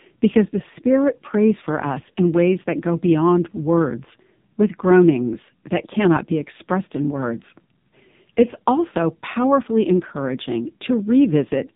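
From start to finish the speech carries the sound of the AMR narrowband mobile codec, heavily damaged. Nothing above 4 kHz gets through, and the voice has a buzzy, synthetic edge, which fits one of the low AMR-NB modes near 5.9 kbps. The codec rebuilds each frame from a vocal tract model driven by a few pulses, so the timbre itself turns artificial. A plain low-pass filter would only muffle the sound and would leave it natural.

At 2.12 s there is a lost AMR speech frame: a brief dip or warble lasting 20 ms, which fits a single frame failing its checksum. The decoder fills the gap by reusing the last good pitch and vocal tract settings at reduced gain, so the sound is briefly smeared and does not drop to silence. A simple dropout would leave a hard gap or a click. Here the sound carries through the gap, thinner for that instant.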